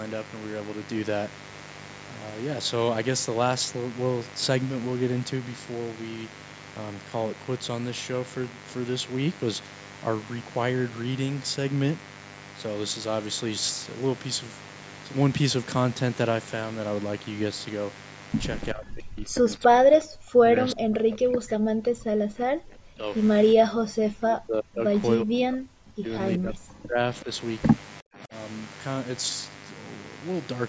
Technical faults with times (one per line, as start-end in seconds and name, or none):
0.00-30.68 mains buzz
18.73-23.10 speech suppressed in double talk
23.55-24.86 speech suppressed in double talk
25.21-27.30 speech suppressed in double talk
27.17-27.24 echo leak
28.01-28.33 speech suppressed in double talk